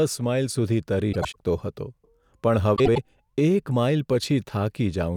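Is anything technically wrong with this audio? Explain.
Yes. Frames out of order at 1.12–1.36 s and 2.76–2.98 s, just before "એક માઈલ": two adjacent 96 ms blocks decoded swapped, giving garbled flutter.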